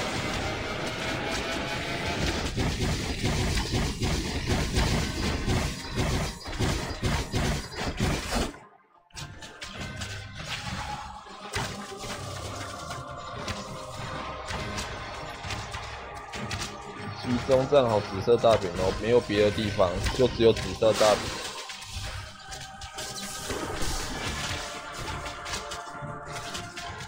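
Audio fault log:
22.93 to 22.96 s, corrupt frame decoded: a short chirp-like blip lasting about 36 ms breaks into the sound, with the error peaking around -30 dBFS. Damaged bits in a few compressed frames, roughly three, were decoded as if valid, so misread gains and codes placed energy at frequencies where none belonged. On a spectrogram it shows as a brief vertical smear of stray energy confined to those frames; the waveform shows a small burst that breaks from the surrounding envelope.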